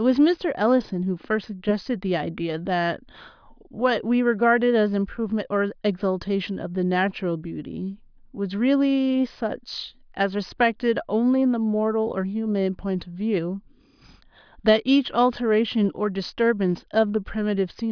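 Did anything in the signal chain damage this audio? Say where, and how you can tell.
No, nothing in the signal chain damaged this audio.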